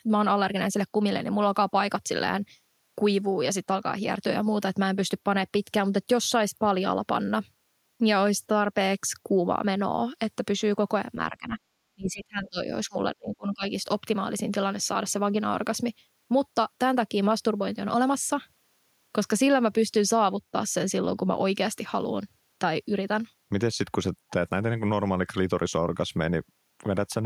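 Speech, with the talker's level pulled down in bursts at 11.3–11.59 s, 11.95–12.67 s, 12.87–12.96 s and 13.16–13.73 s, dipping by roughly 20 to 30 dB. This is speech suppressed in double talk, likely an echo canceller muting its own talker while the far side also spoke.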